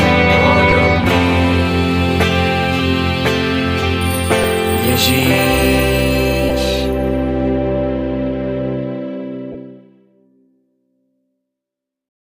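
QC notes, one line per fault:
0.71, 4.43, 6.49 s and 9.52 to 9.55 s: lost LE Audio frames. Each of the first three is a 7.5 ms dropout, which fits one missing frame. The last lasts 22.5 ms, which points to three frames in a row. The LC3 decoder fills each gap by reusing the last spectrum with random signs. The phase no longer lines up, so the gap sounds like a brief noisy smear.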